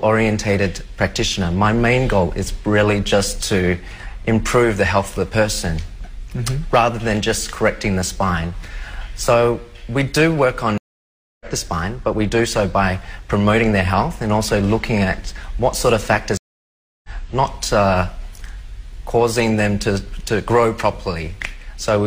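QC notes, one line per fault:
10.78 s to 11.46 s and 16.37 s to 17.09 s, stream reconnect: the sound drops out for about 0.63 s and then about 0.67 s, and each time it comes back roughly 0.7 s further along, so a stretch of the material is skipped rather than paused. Both times the connection broke, playback went silent while the player reconnected, and a fresh decoder picked the live stream up at a later point.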